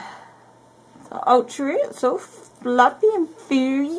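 Nothing stood out on listening, and no technical fault could be heard at any point in the clip.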